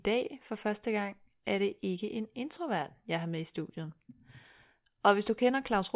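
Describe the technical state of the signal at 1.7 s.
At 1.7 s the speech signal is intact, with no audible technical fault at that moment.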